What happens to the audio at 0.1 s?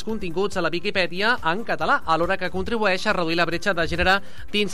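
Nothing goes wrong at 0.1 s; the audio plays through that moment intact, with no audible fault.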